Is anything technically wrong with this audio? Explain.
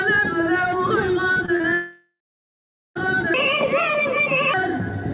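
Yes, there are three faults, heard through a band-limited path with nothing above 4 kHz, which fits G.711 telephone coding.

From 1.32 to 1.66 s, repeated packet loss (robotic sound) leaves four short holes, the longest 38 ms. Each is patched by extending the previous sound, so about a third of the stretch sounds choppy.

From 1.74 to 2.97 s, about 1.22 s of audio is missing, likely a long network dropout. The concealment buzz fades, leaving roughly 0.79 s of silence before the sound resumes with that part lost.

From 3.34 to 4.54 s, a section at the wrong speed plays at 1.59 times normal, likely from a clock mismatch. It sounds hurried and about seven semitones higher.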